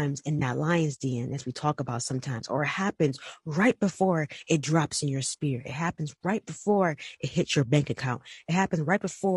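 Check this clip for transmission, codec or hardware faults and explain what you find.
Two faults are present: codec coloration throughout, and two brief concealed dropouts.

Throughout, the speech sounds rough and grainy, with noise between harmonics, which points to likely low-delay AAC compression (AAC-ELD) near 32 kbps; its short frames blur pitch detail, unlike broadband hiss.

AAC frame loss with concealment occurs at 0.39 to 0.42 s and 8.33 to 8.39 s. The decoder rebuilt missing frames from earlier spectrum, producing smeared, phasey patches rather than clicks or hard gaps.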